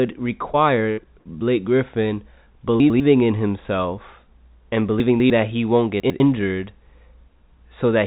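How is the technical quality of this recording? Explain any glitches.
The speech carries several transmission glitches, all typical of a packet-switched call. It sounds band-limited with nothing above 4 kHz, consistent with a narrowband telephone codec such as G.711 mu-law.

Short concealed packet loss occurs at 0.52 to 0.56 s and 1.03 to 1.07 s. In each case about 20 ms of audio never arrived, and the receiver synthesised roughly 15 ms by extending the preceding sound before crossfading back. The result is a brief smear or wobble.

A burst of packet loss occurs at 0.92 to 0.99 s and 1.19 to 1.27 s. Each time, about 60 ms went missing. The decoder stretched the last sound for some 57 to 62 ms while attenuating it, producing a held buzz or fading hiss, and then resumed with that stretch of speech absent.

Chunks out of order appear at 2.8 to 3.0 s (just before "in himself and"), 5.0 to 5.3 s (between "in himself and" and "that he won't"), and 6.0 to 6.2 s (just after "that he won't"). 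A 100 ms block arrived one or two chunks late and plays after its successors. Nothing is lost, but the jumbled order and hard joins produce a garbled moment.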